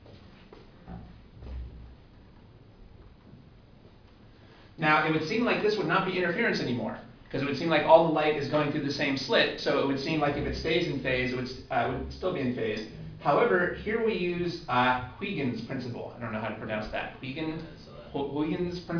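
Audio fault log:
Nothing to log here; I listened all the way along and didn't catch a single problem worth noting.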